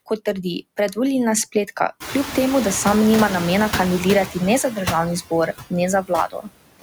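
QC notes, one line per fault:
Throughout: noise suppressor artifacts. The suppressor pulls down bands it judges to be steady noise by about 19 dB, frame by frame, so the background dips between phrases and swells under speech.
2.0–4.25 s: noise suppressor catching up. The room noise jumps by about 24 dB at 2.0 s. The suppressor's noise estimate lags, cutting only about 6 dB at first, so the louder background pushes through and sinks over roughly 2.25 s as the estimate adapts.
4.63–4.79 s, 6.02–6.11 s, 6.3–6.51 s: speech cut by the noise suppressor. The suppressor mistakes parts of the speech for noise and turns them down with the background, by about 8 dB, 17 dB and 18 dB respectively, each for a tenth to a fifth of a second, leaving sounds swallowed or faint.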